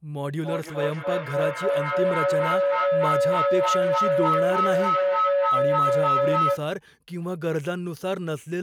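A feedback loop formed between two devices on the same call in one room, so this speech clip carries a feedback howl from 0.35 to 6.67 s. The tone builds around 500 Hz, pulses roughly every third of a second, and peaks about 6 dB above the speech.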